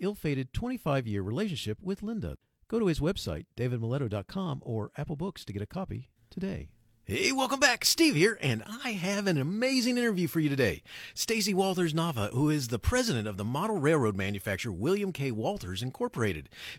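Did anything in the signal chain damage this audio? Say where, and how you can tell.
No, nothing along the chain has left a detectable mark on this speech recording at any stage.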